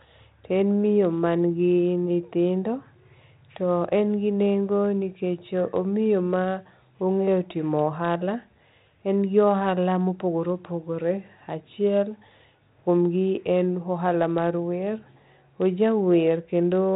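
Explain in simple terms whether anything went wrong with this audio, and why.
Nothing went wrong with this audio, as no fault can be heard anywhere in the clip.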